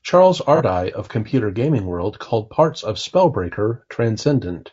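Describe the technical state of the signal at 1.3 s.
At 1.3 s the speech carries the same rough, grainy texture that runs through the whole clip, with noise filling the gaps between the pitch harmonics and a thin, somewhat artificial top band. This is likely low-delay AAC compression (AAC-ELD): at this low bitrate its coarse quantization leaves noise between the harmonics, and the damage level fits a bitrate around 32 kbps. The fault here is a constant harmonic graininess.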